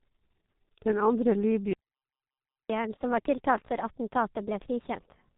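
Throughout, the speech sounds muffled and hoarse, with blurred consonants and nothing above 3.8 kHz, consistent with heavy G.723.1 codec damage near 6.3 kbit/s. From 1.73 to 2.70 s the sound stops dead for 0.96 s, a playback stall, likely the player running out of data. From 2.70 s to the end, speech runs 1.25 times fast and about four semitones higher as the catch-up at higher speed clears the backlog.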